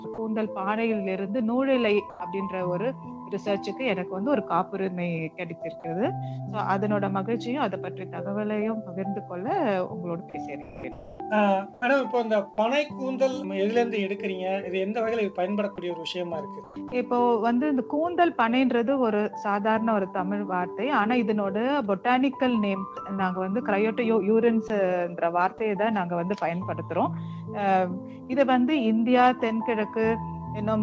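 At 0.14 to 0.18 s the sound gives way for about 40 ms to a flat, steady noise, and at 2.10 to 2.20 s a 100 ms stretch is filled the same way, with about 50 ms of real sound missing. This is sound dropped by the voice detector, likely because the sender judged a quiet part to be background, stopped transmitting, and the receiver filled the gap with comfort noise. The same happens at 16.88 to 16.92 s (about 40 ms) and 24.68 to 24.70 s (about 20 ms). What sets these apart from packet loss is that the fill is a uniform synthetic hiss, not a continuation of the preceding sound.

From 10.62 to 11.20 s the detector likely switches on and off repeatedly, so about 500 ms of this stretch is swapped for comfort noise in pieces. The result is sound chopped by the voice detector. Instead of one clean gap, the edges of the sound flicker.

At 11.74 to 11.82 s, and again at 16.64 to 16.92 s, comfort noise takes the place of the background. 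No wanted sound is lost here. Only the pause between sounds is replaced. In the first case the real background, about 26 dB below the loud parts, turns into a featureless noise about 3 dB quieter, for 80 ms. In the second, about 160 ms of background is synthetic.

At 28.24 to 28.31 s there is a burst of packet loss. The receiver continues the last sound for about 54 ms and fades it out, giving a held, decaying tail, and then resumes with about 60 ms of the original missing. Unlike the detector dropouts, the fill takes its character from the sound just before the gap rather than from a steady background-like noise. Throughout the clip nothing is present above 8 kHz, which fits a G.722 call codec at 64 kbps.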